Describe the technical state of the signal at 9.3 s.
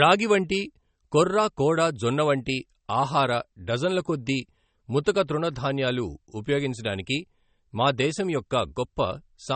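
At 9.3 s the speech is still carrying the MP3 compression damage heard across the whole clip, likely from an encoder starved of bits, which fits a rate near 32 kbps. Treble is cut off above 8.4 kHz, and weak frequency lines flicker between frames, leaving a plainly audible watery, swirling texture and smeared attacks.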